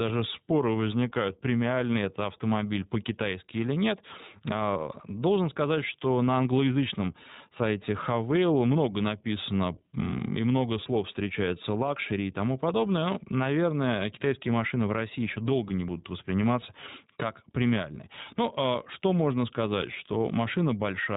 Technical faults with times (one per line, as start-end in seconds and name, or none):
0.00-21.17 iLBC codec